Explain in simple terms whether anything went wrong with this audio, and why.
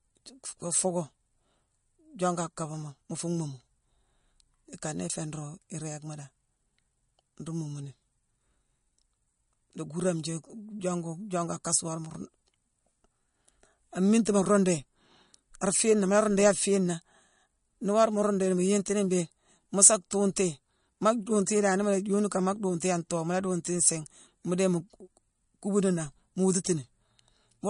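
Something did go wrong, and it lasts the whole clip. The speech sounds watery and swirly, and s sounds come out with a metallic chirp. Nothing is heard above 10.6 kHz, so the top end is dull. The likely cause is MP3 compression squeezed too hard. With too little room, the encoder chops off the highest sounds. It also drops quiet detail, which then flickers in and out and makes that watery sound.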